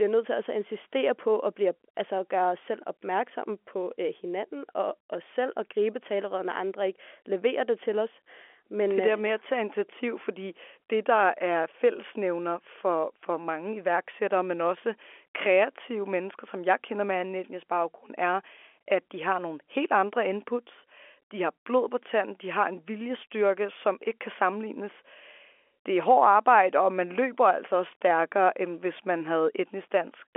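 No technical faults are audible.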